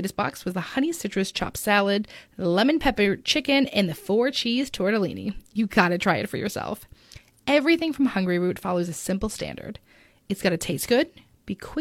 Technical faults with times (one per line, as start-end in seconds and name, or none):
none